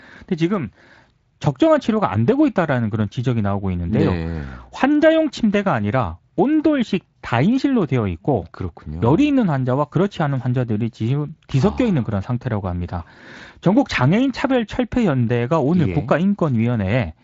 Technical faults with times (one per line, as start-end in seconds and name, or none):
none